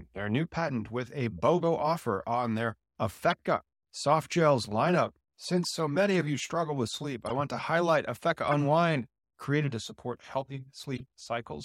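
Speech with six corrupt frames decoded, heard as brief chirps and noise blips at 1.38 s, 3.30–3.34 s, 5.63 s, 7.26–7.42 s, 8.47–8.54 s and 10.96–11.01 s. Damaged compressed frames played anyway put energy at wrong frequencies, showing as short misplaced spectrogram patches and waveform spikes. The longest is at 7.26 s, and the loudest follows "to highlight".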